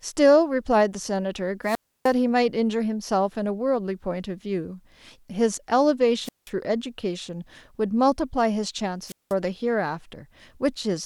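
At 1.63 s, 6.23 s and 9.06 s the speech suffers a wireless microphone squelch dropout. The radio link fades, hiss swells, then the receiver's squelch mutes the output for about 0.3 s, 0.18 s and 0.19 s before the voice returns, by 2.14 s, 6.50 s and 9.34 s. The rising static before each hole marks it as an analogue RF fade rather than a digital dropout, which cuts off cleanly.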